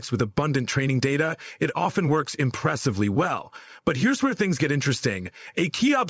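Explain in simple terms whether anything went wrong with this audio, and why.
Nothing went wrong: no dropouts, glitches or other technical faults can be heard anywhere in this recording.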